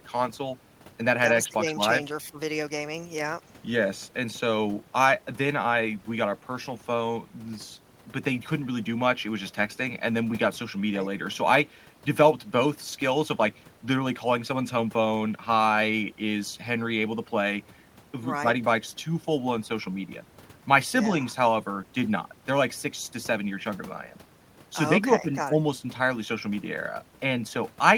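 Nothing stood out on listening to this speech recording, with only faint room noise in the background, about 41 dB below the speech.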